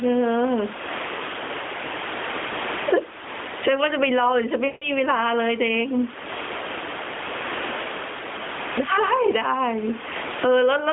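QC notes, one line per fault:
throughout, gain pumping: The input gain is likely set far too high for the microphone, with a fast limiter or compressor clamping down on every loud sound. The level swings by around 25 dB. Loud and quiet passages sit unnaturally close in level, so the speech sounds squashed.
2.48–2.52 s and 4.66–4.91 s, lost AMR speech frames: Radio errors corrupted speech frames, so the narrowband AMR decoder filled the gaps by repeating the last good pitch and vocal tract settings at falling gain. The 40 ms loss at 2.48 s is a short loss of two frames. The 160 ms loss at 4.66 s fits a run of about eight 20 ms frames. In that longer run the sound smears into a drawn-out tone and fades toward silence before speech returns weak or rough for a moment.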